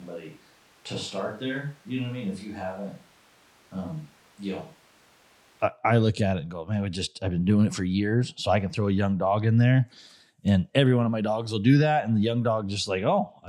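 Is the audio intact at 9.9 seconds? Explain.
Yes, the speech plays through cleanly at 9.9 seconds with no dropout, click, distortion or other fault at that moment.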